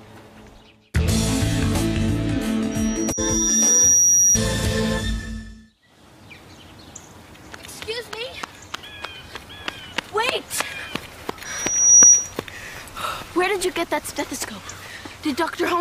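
A piercing 5.8 kHz tone swells from about 2.71 to 4.39 s, then returns faster and louder from 11.45 to 12.34 s: loudspeaker feedback squeal, where the microphone re-amplifies its own loudspeaker output.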